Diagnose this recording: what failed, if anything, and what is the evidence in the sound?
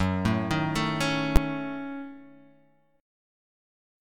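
A single loud bang at 1.36 s points to invalid numbers at full scale, arising in processing and clamped at sample-format conversion. A calculation produced infinite or invalid values that were pinned to maximum amplitude for about 12 ms, which fits a 512-sample block, so it is heard as one bang.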